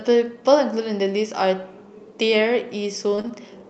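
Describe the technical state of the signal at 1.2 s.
At 1.2 s the speech comes through intact with no fault, carried by the call path's Opus coding with its high end limited to about 8 kHz.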